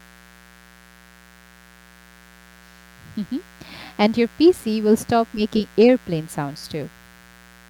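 A steady, raspy buzz runs under the speech from start to finish, sitting roughly 30 dB below it, quiet but never letting up. This is mains buzz on a 60 Hz supply. A dimmer, rectifier or gap in shielding has let sharp switching spikes into the signal path twice per mains cycle, so the interference is not a pure hum but a dense stack of 60 Hz harmonics reaching up into the kilohertz range, which gives it that edge.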